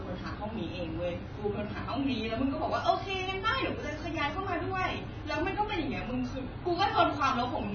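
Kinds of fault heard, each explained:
AAC compression: Throughout, the speech has nothing above 6.7 kHz and sounds dull and smeared, with a heavy watery warble on sustained sounds and fizzy sibilants. This is likely AAC-LC quantising its frequency lines coarsely, which fits a bitrate near 16 kbps.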